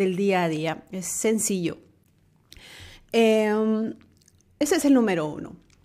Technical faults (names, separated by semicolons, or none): damaged data in a compressed stream